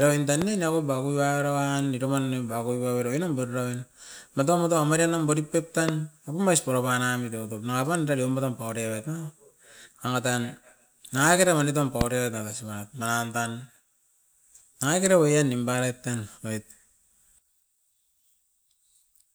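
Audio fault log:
0.42–0.44 s, 5.89–5.91 s, 12.01–12.03 s: loud pop, a single sharp click each time, after "oin tan", between "marienum barit pep" and "apaum ais", and after "nangakera wani tam", peaking about 15 dB, then about 20 dB twice, above the speech, which continues underneath. A brief voltage step, likely from a plug, switch or static discharge, is shaped by the following circuitry into a roughly 22 ms burst. On the waveform each is a tall narrow spike; on a spectrogram, a thin full-height vertical stripe.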